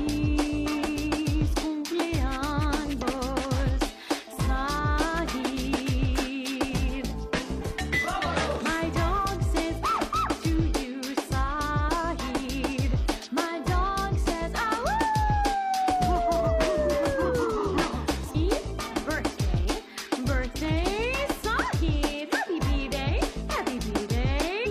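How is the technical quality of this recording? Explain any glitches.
The recording has two kinds of technical fault: four short bursts from damaged data in a compressed stream, and one bit error spike.

Damaged data in a compressed stream: corrupted bytes stop the decoder from reading frames correctly, so it loses sync and hunts for the next valid frame header. Each time, this produces a brief chirp, squawk, click or short hole of about 50 to 60 ms. It happens at 2.98 to 3.03 s, 7.57 to 7.63 s, 18.30 to 18.36 s and 24.62 to 24.67 s.

Bit error spike: at 10.54 s, a single flipped bit in one sample shifts that sample's value by a power of two before it returns. You hear one sharp, broadband tick that has nothing to do with the surrounding sound.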